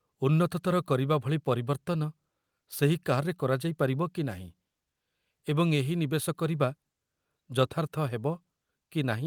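No technical faults can be heard anywhere in the recording.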